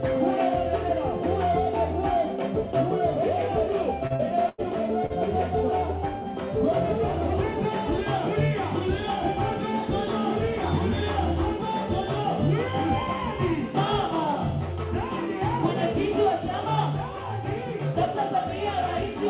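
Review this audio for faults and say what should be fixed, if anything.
Short concealed packet loss occurs at 4.07 to 4.13 s, 4.16 to 4.22 s and 5.06 to 5.13 s. Each time, about 30 ms of audio missed the decoder. The receiver extended the preceding sound and blended back, leaving a brief smear or wobble. Preventing it needs forward error correction or redundant packets (RED) so single losses can be rebuilt.

A burst of packet loss spans 4.49 to 4.61 s, with about 90 ms gone in a row. Concealment carried the last sound forward while fading it, giving a held buzz or dying hiss, and the audio then resumes further on with that stretch missing. Preventing it needs a larger adaptive jitter buffer together with network QoS prioritisation, so consecutive packets arrive in time.

The band stops at 4 kHz, which fits a narrowband 64 kbit/s G.711-type call path and is not part of either loss.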